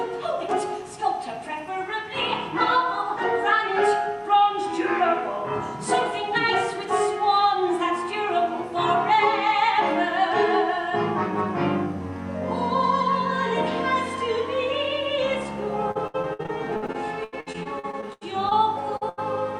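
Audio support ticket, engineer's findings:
Repeated packet loss (robotic sound), 15.91 to 18.53 s. Choppy, broken-up audio with pieces missing. Receive path, jitter buffer and decoder concealment. 19 separate gaps, about 0.67 s synthesised in total against 0.68 s of real audio lost, longest gap 82 ms. Each hole is patched by extending the preceding sound before the next one arrives, so roughly a quarter of this stretch is concealment rather than original signal.

Short concealed packet loss, 18.97 to 19.03 s. Brief smear or wobble in the sound. Same receive-side concealment. About 40 ms of audio never arrived in time. The decoder filled 41 ms by carrying the last sound forward, either as a pitch continuation or as shaped noise depending on the material, then cross-faded back into the real stream.

Burst of packet loss, 19.09 to 19.19 s. Held tone or fading hiss, then a jump forward. Network path feeding the jitter buffer. 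About 80 ms of audio lost, covered by 83 ms of concealment that extends the last sound and attenuates it over the gap. Playback resumes further along, so the material in between is simply gone.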